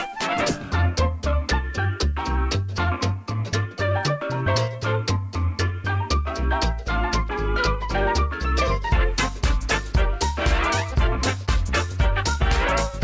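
No faults can be heard anywhere in this clip.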